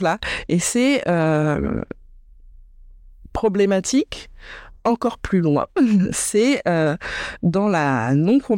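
Nothing in the speech recording stood out as a technical fault on listening.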